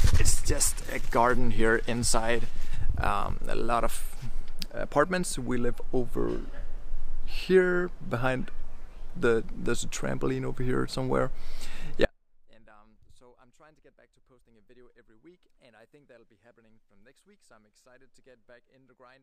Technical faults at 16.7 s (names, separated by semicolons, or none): audio dropout to a faint residue